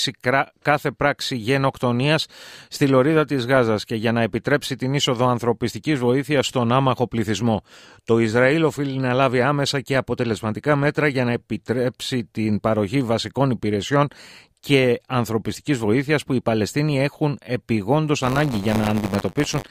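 From 18.21 s to the end at 19.71 s, buffer tearing: the writer and reader of the ring buffer have slipped and cross every period, so a small slice of each buffer replays audio from about 20 ms earlier, producing a steady robotic 100 Hz buzz over the speech.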